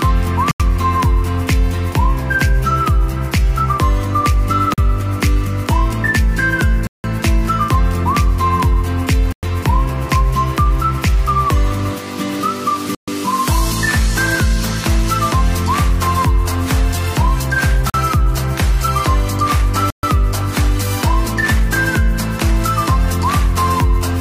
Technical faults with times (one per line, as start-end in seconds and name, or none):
0.51-0.60 block of digital silence
4.74-4.78 block of digital silence
6.87-7.04 block of digital silence
9.32-9.43 block of digital silence
12.95-13.08 block of digital silence
17.90-17.94 block of digital silence
19.90-20.03 block of digital silence